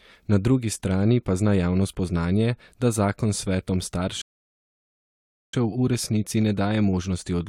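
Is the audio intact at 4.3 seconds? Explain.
No. At 4.3 seconds the speech is halted by a rebuffering stall running from 4.22 to 5.54 s. The player used up its downloaded audio and waited for more. The sound drops to silence, then resumes exactly where it stopped. Nothing is lost, but about 1.3 s is added.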